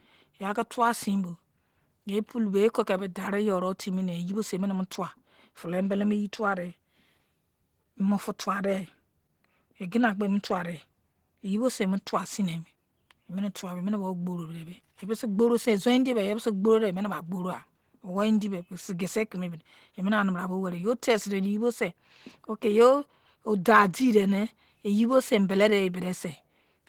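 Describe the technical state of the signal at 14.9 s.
At 14.9 s the speech sounds muffled and hoarse, as it does throughout the clip, likely from Opus compression in hybrid mode at a low rate near 16 kbps.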